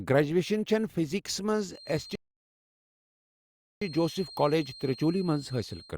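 A speech recording carries a feedback whistle from 1.65 s to the end, a thin steady tone at 4.2 kHz sitting roughly 20 dB below the speech and swelling and fading slowly in level. It is likely caused by a loudspeaker-to-microphone loop held just at the edge of howling. On a spectrogram it appears as a narrow horizontal line at 4.2 kHz. A rebuffering stall runs from 2.15 s to 3.82 s. Playback halts when downloaded audio runs out, then resumes exactly where it stopped, losing nothing but adding 1.66 s. On the waveform it shows as a flat gap.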